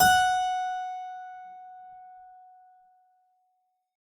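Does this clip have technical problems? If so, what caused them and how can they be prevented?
No, nothing in this bit of music points to a technical problem, so there's no cause to track down and nothing to guard against here.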